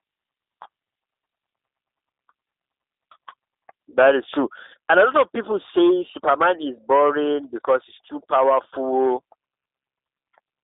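From start to finish, the speech carries G.729 codec damage, and it is plainly audible. The codec models each 10 ms frame with a vocal tract filter, a pitch predictor and a few coded pulses, rather than keeping the waveform. The sound matches an 8 kbit/s G.729A link. The band runs from about 300 Hz to 3.7 kHz. Nothing above 3.8 kHz survives. Voices sound thin, slightly rough and synthetic.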